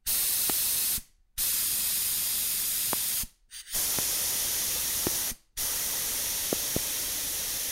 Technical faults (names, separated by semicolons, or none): loud pop